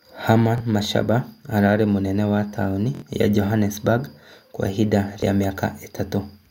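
Repeated buffers occur at 0.58–0.60 s, 2.95–3.02 s just after "ararĩ mũnene wa taũni", and 5.20–5.22 s. Each time, new audio missed its deadline and the device replayed the previous block, about 23 ms long, which fits a 1024-sample buffer. The first and last play the block once more, giving a brief buzzy click. The middle one repeats it three times, a stutter that skips around 70 ms of speech.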